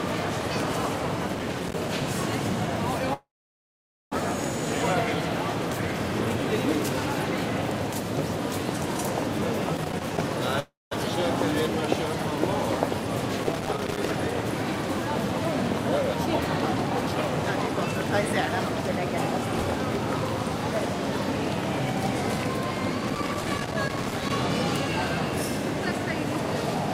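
Everyday sound, marred by loose connector crackle in four irregular scratchy bursts at 1.28–2.14 s, 9.76–10.18 s, 13.43–14.11 s and 23.04–24.30 s, where a dirty or worn contact chops the signal on and off. Unlike clipping, the crackle follows no level peaks and sounds erratic rather than harsh on loud moments. Two long network dropouts, at 3.13–4.18 s and 10.60–10.95 s, are likely caused by audio failing to arrive for a long stretch. In each, the last sound is drawn out as a fading buzz before the clip goes quiet, and then resumes with about 0.6 s simply gone. The first gap sinks into near silence for most of its length, and the timing afterwards runs roughly 0.4 s later. The second gap is brief, with the timing pulled about 0.3 s earlier. That fade into silence and lost stretch set these apart from brief packet-loss glitches.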